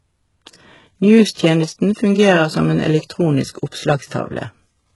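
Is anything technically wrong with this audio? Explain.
Yes, two faults are audible.

Throughout the speech, the treble has the synthetic quality of HE-AAC compression, likely at a very low bitrate near 12 kbps. The upper band is rebuilt from copied lower bands rather than coded, so s sounds turn gritty and metallic. On a spectrogram, the upper region shows repeated, blocky patterns and nothing above 11.5 kHz.

From 1.33 to 1.37 s, just before "fungerer som en elektronisk", there is pre-echo. Quantisation noise meant for the loud attack spreads across its transform block and fills about 40 ms of quiet before the onset, heard as a brief hiss that softens the attack. The waveform shows low-level fuzz rising ahead of the transient, and the spectrogram shows a faint broadband smear leading into it.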